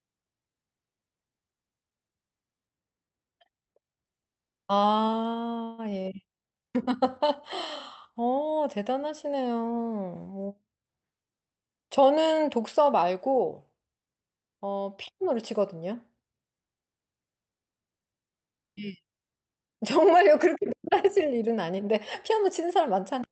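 A call audio freeze runs from 5.63 to 5.91 s, most likely caused by packets stalling in transit so the jitter buffer ran dry. The receiver stretched the last sound into a fading buzz or hiss for roughly 149 ms rather than dropping to silence. When the packets resumed, the speech carried on from exactly where it stopped, so nothing is lost. The pause is simply inserted, pushing everything after it later.

A jitter buffer speed-up follows from 10.48 to 11.69 s. With more audio queued than the receiver wanted, it trimmed many short pitch-period slices in quick succession, about 150 ms in total. The speech there runs at 113% speed with its pitch unchanged, so the phrase sounds rushed. All of this sits on a call path whose coding noise and 8 kHz top end fit Opus at around 64 kbps.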